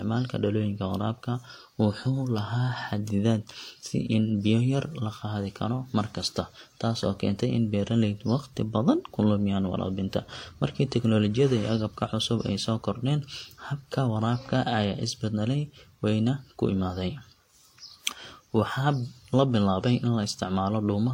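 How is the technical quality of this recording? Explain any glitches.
The quality is compromised throughout by transcoding between lossy codecs. The speech was likely encoded first at a low bitrate, with artefacts that fit HE-AAC at around 32 kbit/s, and then re-encoded, with a character that points to WMA 1 at about 96 kbit/s. The second codec spends its bits reproducing the first codec's artefacts and adds its own. Nothing is heard above 16.2 kHz, and the two sets of artefacts sound layered on top of each other for the whole clip.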